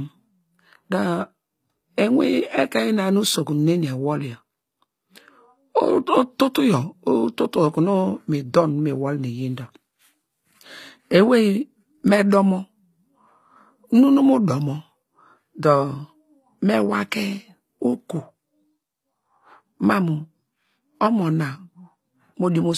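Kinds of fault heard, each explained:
HE-AAC compression: The treble stays bright but sounds synthetic, with sibilants turning gritty and metallic because the upper band is likely rebuilt from copied lower bands, fitting roughly 24 kbps. Unlike an ordinary low-pass codec, content reaches 20.9 kHz.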